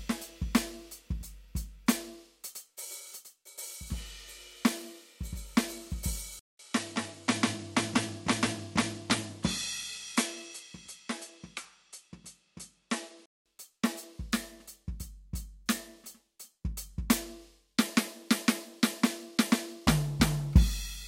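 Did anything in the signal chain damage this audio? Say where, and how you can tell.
Yes. At 6.39 s the music cuts out for about 200 ms, then returns duller and a few dB quieter, with nothing above 11.5 kHz and a faint new noise floor sitting well under the signal. At 13.46 s the full top end and level come back. That points to the input switched to a poorer device at the driver level, likely a fallback to a second, narrower-band microphone that brings its own tone and hiss before the original input is restored.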